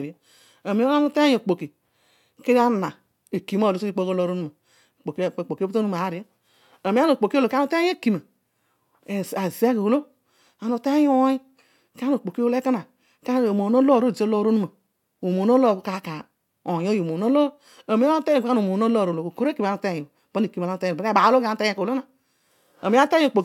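No technical faults are audible.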